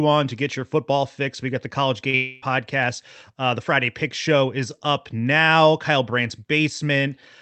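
At 2.10 s a short concealed packet loss leaves a brief smear lasting about 30 ms: a few hundredths of a second never arrived, so the decoder stretched the preceding sound and blended back in. Its brevity separates it from a true dropout, since no gap is heard.

From 2.15 to 2.43 s the sound turns into a fading buzz or hiss continuing for roughly a quarter of a second and then resumes further on, with no stretch of silence between. This points to a likely long network dropout, where about 270 ms went missing and the receiver filled it entirely by extrapolation. Unlike the earlier smear, it lasts long enough to hear the artificial sound decay. The call path, band-limited at 8 kHz by its Opus coding, carries the audio either side.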